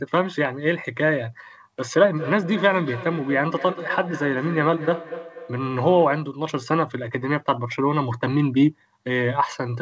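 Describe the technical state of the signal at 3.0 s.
At 3.0 s the speech is trailed by thin, ringing copies of itself arriving at a steady interval of about a fifth of a second, the loudest roughly 13 dB below the direct speech. This is feedback echo between two devices, running from 2.17 to 6.4 s. A second device in the room plays the call audio, this microphone picks it up again, and the local echo canceller doesn't remove it because it only cancels its own playback. The band stops at 8 kHz.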